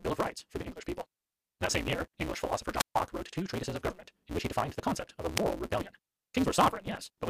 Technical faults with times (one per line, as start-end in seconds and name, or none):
0.00-7.29 block size mismatch (truncated)
2.78-2.95 wireless microphone squelch dropout
5.36-5.39 wireless microphone squelch dropout